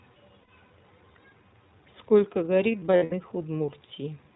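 Throughout, the speech carries plainly audible iLBC codec damage. It is narrowband with nothing above 4 kHz, and slightly rough and synthetic, which fits the 15.2 kbps, 20 ms frame mode. From 0.40 to 0.49 s, lost iLBC frames leave an 80 ms gap, consistent with four frames, that the decoder fills by repeating the last pitch cycle mixed with noise. This sounds like a briefly held, buzzy vowel before clean recovery. Between 2.72 and 3.13 s, about 180 ms of losses scattered over 400 ms produce several shorter buzzy holds, the longest under a tenth of a second.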